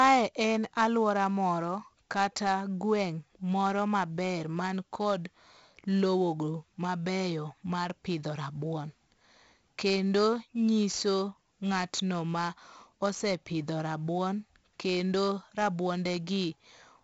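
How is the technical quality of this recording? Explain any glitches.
The recording is marred throughout by heavy 4-bit ADPCM compression. Each sample is coded as a coarse 4-bit step from a predicted value, with the step size adapting as it goes, so the coding error rides along with the speech level. That gives a gritty hiss on every louder syllable and roughness on sharp onsets where the step can't grow quickly enough. Nothing is present above about 7.7 kHz, which dulls the speech and fits a low sample rate near 16 kHz at about 64 kbps.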